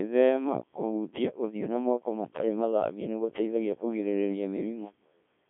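From start to end, a Codec 2 vocoder rebuilds the speech from sine waves, sounding robotic and buzzy. Heavy damage fits about 1.3 kbit/s. Nothing sounds above 3.8 kHz.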